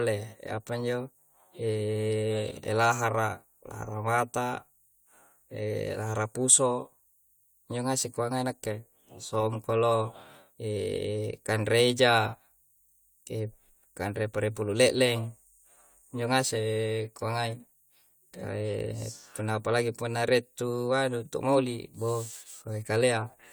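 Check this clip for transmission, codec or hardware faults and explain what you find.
No faults are audible.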